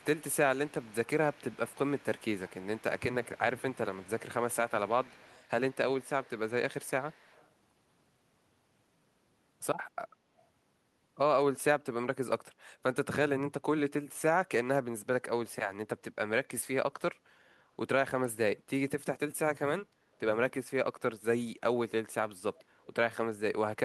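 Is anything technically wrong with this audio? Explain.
Yes, there is echo leak at 0–0.36 s, 0.56–5.49 s, 5.7–5.76 s, 6.0–6.51 s, 6.81–7.49 s and 22.6–22.64 s. A faint copy of the speech trails it by 151 ms, roughly 25 to 30 dB down. A far-side loudspeaker echo likely slipped past its canceller.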